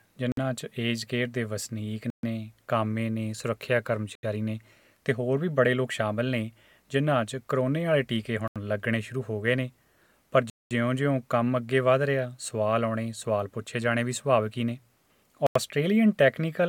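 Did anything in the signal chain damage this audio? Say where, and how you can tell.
Yes. The sound cuts to complete silence six times and then picks up again: at 0.32 s for 54 ms, 2.10 s for 132 ms, 4.15 s for 79 ms, 8.48 s for 81 ms, 10.50 s for 209 ms, the longest, and 15.47 s for 89 ms. Clean, irregular gaps like these point to the wireless playback link, most likely a Bluetooth stall. Held-up packets let the receiver's buffer run dry, and output halted until the resent data arrived.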